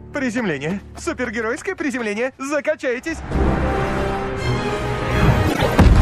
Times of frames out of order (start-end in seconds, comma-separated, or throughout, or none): 5.48-5.66